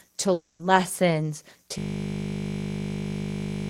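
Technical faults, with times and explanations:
0.33 to 0.61 s, long network dropout: The speech cuts out here. For about 0.26 s the last sound is stretched into a fading buzz or hiss, then there is a brief silence of about 10 ms. When the speech returns, that stretch is gone rather than delayed. The likely cause is a gap in the incoming audio stream. The receiver filled the hole by extending what it last had, and that concealment fades.
1.78 s to the end, system hang loop: The speech stops and becomes a steady buzz that lasts until the clip ends. A single 20 ms piece of audio repeats exactly, nearly a hundred times. The system froze while the sound hardware kept replaying the same small buffer. Because each pass lasts 20 ms, the repeats merge into a 50 Hz tone instead of separate stutters.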